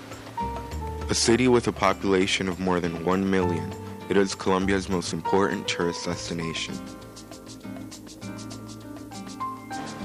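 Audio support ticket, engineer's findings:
No audible defects found on review; nothing to attribute to capture, processing or playback path.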